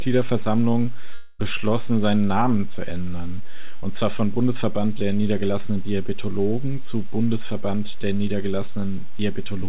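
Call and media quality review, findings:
Long network dropout, 1.14 to 1.45 s. Speech stops and a fading concealment buzz or hiss fills roughly the whole gap. About 0.26 s of speech never arrives. Playback resumes further on. Likely cause: network stall upstream of the jitter buffer.

Burst of packet loss, 3.76 to 3.84 s, between "zu ändern" and "zwar von". About 60 ms missing. Receiver concealment holds the last sound as a short fading buzz or hiss. Speech resumes with that fragment skipped. Component: transport, G.711 call leg.

DC offset, throughout. Inaudible as such. Constant shift of the waveform away from zero. Steady energy at 0 Hz, eating headroom ahead of clipping. Probable component: capture front end or preprocessing lacking a high-pass stage. Band-limited to 4 kHz by G.711.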